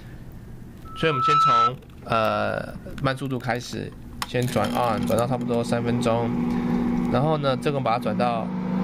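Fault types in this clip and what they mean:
Loudspeaker feedback squeal: a microphone picks up the loudspeaker it feeds, and gain around that loop exceeds one at 1.3 kHz, so that frequency reinforces itself. A pure 1.3 kHz tone swells over about half a second, from 0.85 to 1.72 s, rising to about 5 dB above the sound.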